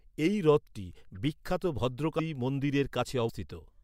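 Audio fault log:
2.18 s and 3.28 s, compressed frames skipped: right after "এই হ্রদটি বিখ্যাত" the audio leaps ahead about 100 ms, then later about 150 ms. That fits a few whole 26.1 ms frames gone missing or rejected as damaged, and overlapping neighbour frames smear each join into a soft blip, not a click.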